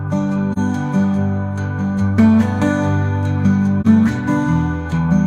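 At 0.53 to 0.59 s and again at 3.81 to 3.86 s the sound briefly sinks into a short, soft-edged gap, fading out and back in. This is AAC frame loss with muting: each gap fits a single lost AAC frame of roughly 43 ms, whose spectrum the decoder replaced with silence. The overlapping transform windows either side smear that silence into a gentle fade across about one frame's length.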